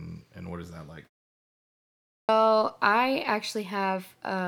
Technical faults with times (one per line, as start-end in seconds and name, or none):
1.94-2.29 clipped start after a pause